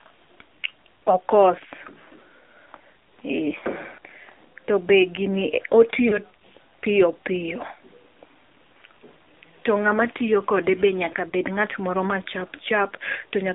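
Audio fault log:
Throughout: AMR narrowband mobile codec. Buzzy, synthetic speech band-limited to 250 Hz to 3.7 kHz, which fits a low rate near 7.4 kbps. A spectrogram shows a hard ceiling and smeared harmonics.
3.60–3.64 s, 6.08–6.19 s, 11.30–11.33 s (just after "tiyo kode be nyaka"): lost AMR speech frames. The decoder repeats the last pitch with fading gain, giving brief warbly dips. The waveform briefly sags in envelope, with the dip at 6.08 s the longest.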